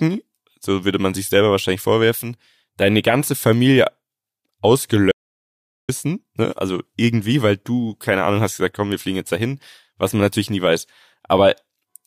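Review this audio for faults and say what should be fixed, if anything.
An audio dropout to silence runs from 5.12 s to 5.89 s. The speech cuts off abruptly and returns just as suddenly about 0.77 s later. The gap is dead silence, with no room tone underneath. Whatever was said in that stretch is lost and cannot be recovered. The likely cause is a brief loss of input, such as a loose connection or a momentary mute, while recording continued. Secure cables and monitor input levels during the session.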